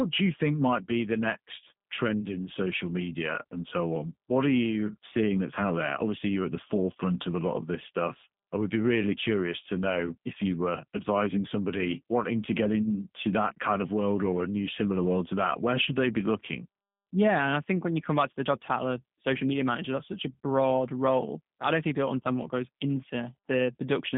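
From start to finish the speech carries G.729 codec damage, and it is plainly audible. The coder rebuilds each 10 ms frame from a vocal tract filter, a pitch predictor and a few pulses, so voices come out slightly rough and synthetic, a sound that fits an 8 kbit/s link. A spectrogram shows a band from about 150 Hz to 3.6 kHz with nothing above 3.7 kHz, and harmonics look smeared and grainy rather than clean.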